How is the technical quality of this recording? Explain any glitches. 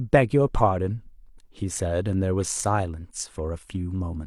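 No technical glitches can be heard in this speech recording; the signal stays intact and continuous throughout, without dropouts, distortion or other disturbances.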